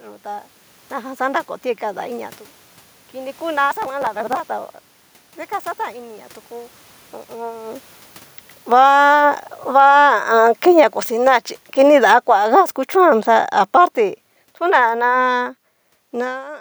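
From 8.58 s to 16.46 s the automatic gain falls: the control judged the input too loud, or its background noise too strong, and kept lowering its gain, about 19 dB in all. The speech fades steadily and the room noise fades with it, unlike the talker's movement near 7.5 s.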